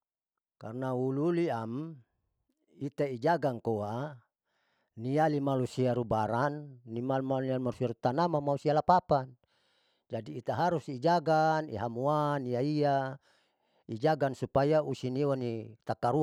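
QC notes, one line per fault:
No faults heard in this speech recording.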